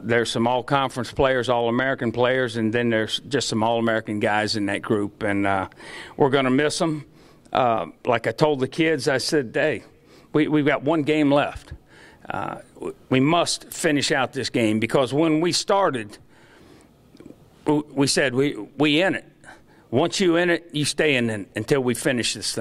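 At 5.81 s there is a brief click or buzz, a repeated buffer: new audio arrived late, so the same 2.9 ms piece, which fits a 128-sample buffer, played four extra times back to back with a hard join at each repeat, with essentially no audio lost.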